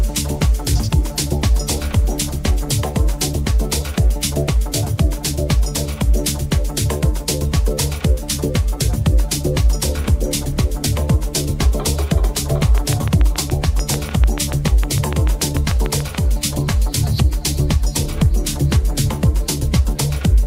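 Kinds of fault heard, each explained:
Train of clicks: likely interference or a faulty connection injecting pulses, heard as about thirty regular, loud ticks at 6.8 per second from 12.63 to 16.16 s.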